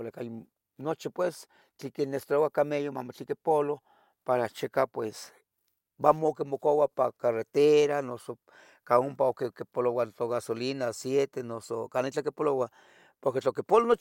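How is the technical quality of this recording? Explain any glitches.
No glitches or technical faults can be heard anywhere.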